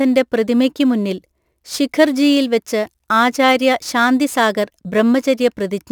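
Throughout the speech there's crude rate conversion, likely a 44.1 kHz to 48 kHz step done by repeating samples, leaving a gritty inharmonic fizz roughly 30 dB down that rides the louder, brighter sounds.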